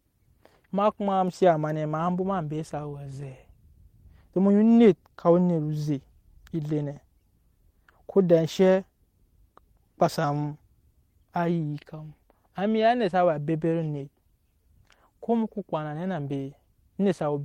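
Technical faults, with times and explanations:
No technical faults are present, so there are no times or explanations to give.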